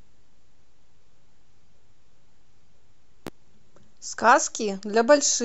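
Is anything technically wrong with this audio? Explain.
Yes. At 3.27 to 3.30 s a single loud pop, about 10 dB above the speech, cuts in sharply while the speech continues underneath. This is likely a sudden voltage pulse from a plug, switch, static or driver glitch, shaped by the downstream circuitry into a brief thump.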